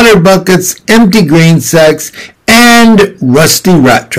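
Hard clipping runs through the whole speech clip: the signal is driven about 22 dB past what the stage can pass, so roughly a third of samples hit the ceiling. It sounds like harsh fuzz on every loud syllable. The waveform shows flat-topped blocks, and the spectrogram shows harmonics smeared upward.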